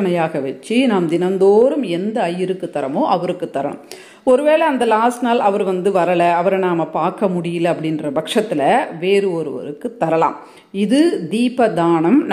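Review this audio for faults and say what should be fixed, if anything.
No faults; nothing needs fixing.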